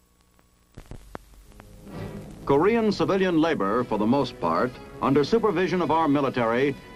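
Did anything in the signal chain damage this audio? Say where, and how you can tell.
Yes. At the codec stage the whole clip sounds dull, with a gurgling, granular texture, likely from MP2 compression at a low bitrate around 80 kbps. A spectrogram would show upper sub-bands flickering on and off in blocky patches, with a sparse, coarsely quantised top end.

From 2.24 to 2.29 s there is a short burst of burbling, DAB burbling from transmission bit errors slipping into the MP2 data. A spectrogram would show isolated sub-band rectangles jumping in level for up to a frame. The waveform would show a brief, irregular level disturbance there.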